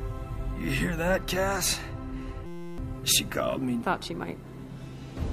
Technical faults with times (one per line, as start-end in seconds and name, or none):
2.46-2.78 system hang loop